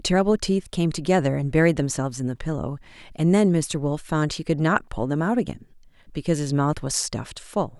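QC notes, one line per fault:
No faults found on the speech track; nothing to flag.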